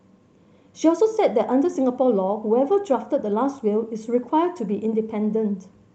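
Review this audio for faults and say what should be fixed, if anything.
Nothing in this audio needs to be fixed, as no faults turn up on review.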